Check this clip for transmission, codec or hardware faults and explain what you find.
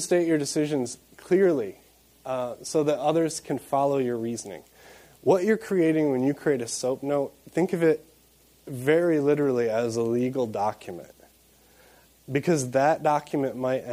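Nothing here sounds like a transmission, codec or hardware fault, so there's nothing to flag.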